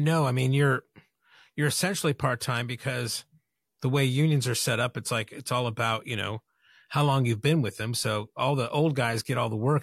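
Sample clock jitter runs through the whole clip. The converter's clock wanders by something like a microsecond or two, so each sample is captured a fraction early or late, and the resulting error is largest wherever the waveform changes fastest. On this speech it appears as a fine hiss and grain riding on the louder, brighter sounds, sitting roughly 35 dB below the signal, and it drops away completely in the pauses.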